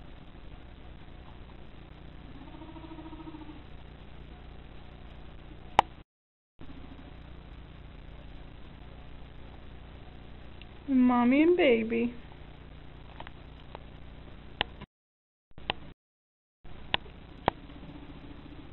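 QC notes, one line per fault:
No faults found on this pass; nothing to log.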